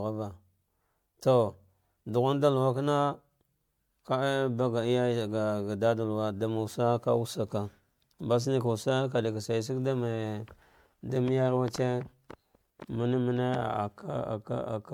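Speech runs the full 15 seconds with generation loss throughout. It sounds swirly, smeared and hollow, and consonant attacks blur. The likely cause is repeated MP3 re-encoding, around four passes at a rate that fits 96 kbit/s, each adding fresh quantisation noise.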